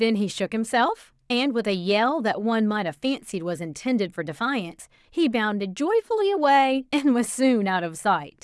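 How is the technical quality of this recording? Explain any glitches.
No technical faults can be heard anywhere in this speech recording. No glitches, dropouts or other interruptions occur, so there is nothing to explain.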